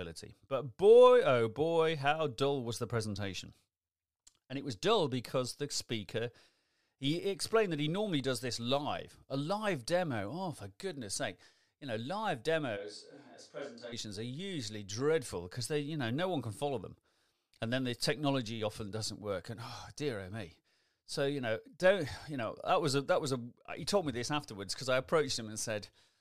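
The close microphone's feed likely drops out from 12.78 to 13.91 s, just after "know live", leaving a switch to a distant microphone. The speech abruptly turns roomy and hollow, thins in the bass, falls roughly 10 dB and picks up room noise, then snaps back.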